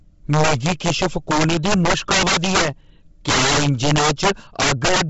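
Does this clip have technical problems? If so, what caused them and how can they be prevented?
Yes. Integer overflow runs through the whole speech clip. Gain about 14 dB too high pushes roughly 7 percent of samples past the integer limit, and they wrap to the opposite sign, producing violent cracks on loud syllables. The waveform shows peaks flipping across the full range rather than flattening. Prevent it by adding headroom and saturating or limiting before converting to integers.

Throughout, the speech also has a grainy, breathy edge, and nothing sounds above about 7.7 kHz. A spectrogram shows a hard ceiling there with noisy, patchy upper bands in 10 ms blocks. The likely cause is heavy Bluetooth LC3 compression at a low bitrate near 16 kbps. Prevent it by using a higher LC3 bitrate or a wired or lossless path.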